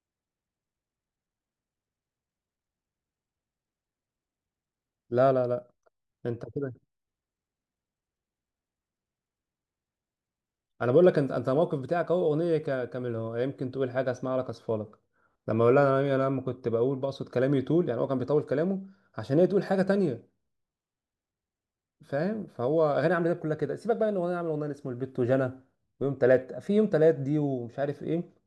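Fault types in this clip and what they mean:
No fault types occur in this clip.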